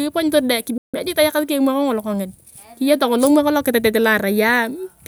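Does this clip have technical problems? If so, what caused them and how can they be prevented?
Yes. A playback stall cuts the speech from 0.78 to 0.94 s, a 0.16 s silence before it resumes; likely the player ran short of buffered data. The waveform shows a flat line there, and the spectrogram a blank vertical gap. A larger playback buffer would prevent it.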